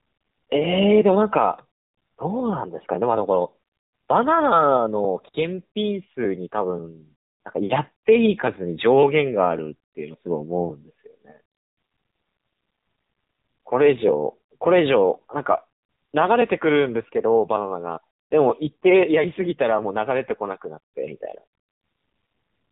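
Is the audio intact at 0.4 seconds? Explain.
No, not really. At 0.4 seconds you're already hearing the AMR narrowband mobile codec, and it runs through the whole clip. Everything is squeezed into an 8 kHz sampled band, so nothing above 4 kHz gets through and the speech sounds muffled and phone-like. The voice is rebuilt from a vocal-tract model fed by sparse pulses, and the damage is plainly audible: buzzy and synthetic, which fits a low 7.4 kbps mode.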